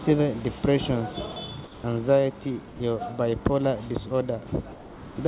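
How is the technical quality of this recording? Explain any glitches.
The recording has two short dropouts. The first runs from 2.68 to 2.80 s. The second runs from 4.72 to 5.16 s. In each, the speech gives way to steady noise and then returns. This is likely sound dropped by the voice detector. The sender judged the sound to be background and stopped sending. The receiver filled the gap with comfort noise. The audio has nothing above 4 kHz, which fits a G.711 call codec. Room noise sits about 42 dB below the speech.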